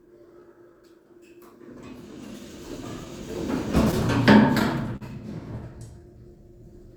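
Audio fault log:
Throughout: clock drift between sender and receiver. The sending end's clock runs roughly 3 percent slow compared with the receiving end, so audio trickles in a bit slower than it's played out. The jitter buffer keeps drifting toward empty, and the receiver has to pad things out now and then to keep going. You hear it as small, unevenly spaced timing wobbles rather than one obvious glitch.
0.40 to 3.06 s: repeated timing corrections. This is where that slow clock shows up. The receiver keeps slipping in tiny repeated slivers, all in the same direction, which pulls the effective speed down to 97 percent and adds somewhere around 70 ms over that stretch. None of the edits is big, so it comes across as a slightly dragging, unsteady pace with the odd faint hiccup.
4.96 to 5.03 s: short stall from a late packet. A packet didn't arrive on time, the buffer ran dry, and the receiver held the last bit of sound for 45 ms until the data showed up, then picked up right where it left off. 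Nothing is actually lost, but the sound sits still for a moment with a slight buzz or dip, and the overall delay grows by 45 ms.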